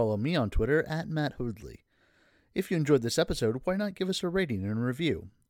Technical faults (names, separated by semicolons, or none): resampler restarted on every block